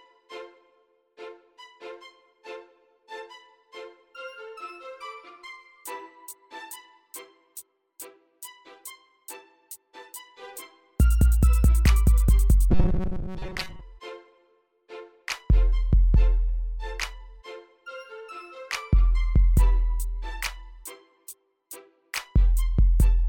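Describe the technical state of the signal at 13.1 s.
At 13.1 s the signal has robotic sound from repeated short buffers, running from 12.71 to 13.83 s. New audio likely arrives too late, so roughly 5 ms slices repeat in place of most of it. The result is a rigid, metallic 188 Hz buzz.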